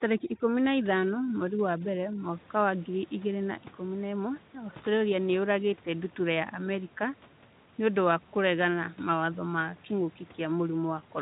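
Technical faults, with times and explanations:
0.00–2.24 s, overdone noise removal: The noise reduction is set too aggressively here, so any frequency band near its noise estimate is pulled far down or muted outright. Low-level parts of the speech drop out with the room noise, which otherwise sits about 24 dB below the speech. The gaps fall to near silence scattered with twinkling specks. It clears just before "wa ngiri igĩrĩ na".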